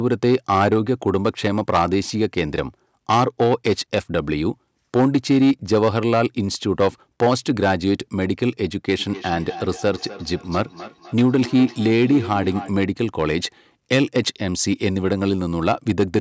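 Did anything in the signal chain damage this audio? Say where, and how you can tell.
Yes. Peaks crackle throughout from hard clipping: overdriven by about 10 dB, a small share of samples are cut flat, adding high harmonics.

From 8.96 to 12.76 s, speech repeats roughly every third of a second, about 15 dB down: feedback echo between two devices, one microphone recapturing the other's playback.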